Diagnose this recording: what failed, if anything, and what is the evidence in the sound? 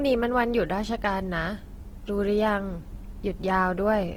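Codec stage: the speech is grainy and rough throughout yet still reaches about 20.1 kHz. That's likely Opus compression in CELT mode, sounding starved near 16 kbps.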